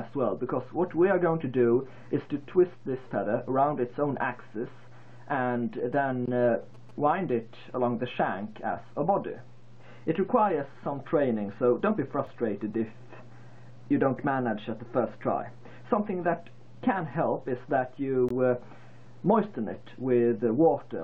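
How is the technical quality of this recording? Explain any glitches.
The technical quality suffers from two kinds of fault: a burst of phone interference and three brief dropouts.

GSM signalling bursts run from 5.78 to 6.91 s. A nearby 2G phone transmits short groups of radio pulses. The audio circuit rectifies them into a galloping dit-dit-dit of short buzzes at 217 Hz, sitting roughly 25 dB below the main sound.

A gap between stream segments occurs at 6.26 to 6.28 s, at 12.27 s, and at 18.29 to 18.31 s. Adjacent segment time stamps leave small holes, about 18, 4 and 20 ms long. The player fills them with silence, so the sound cuts out with hard edges. The spacing of roughly 6 s points to six-second segments.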